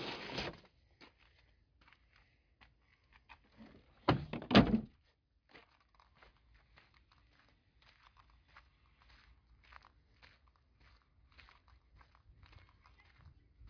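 No technical faults can be heard anywhere in the audio; the signal stays steady and intact throughout.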